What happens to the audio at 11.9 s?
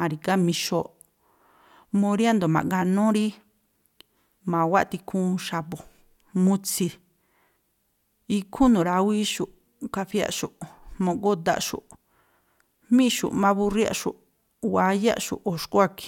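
At 11.9 s the speech carries on intact, with no dropout, click, distortion or other audible fault.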